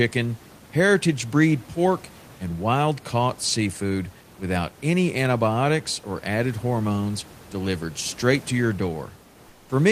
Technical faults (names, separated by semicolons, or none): comfort noise in place of the background